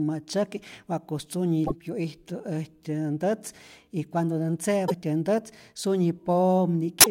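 Around 1.63 to 1.72 s, 4.85 to 4.92 s and 6.99 to 7.07 s the speech briefly breaks up. That's damaged data in the compressed stream: the decoder hits corrupted frames, loses sync and garbles audio while hunting for the next valid header.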